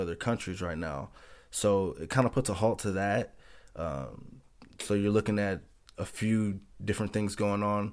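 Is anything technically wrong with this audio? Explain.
No, nothing technically wrong can be heard here.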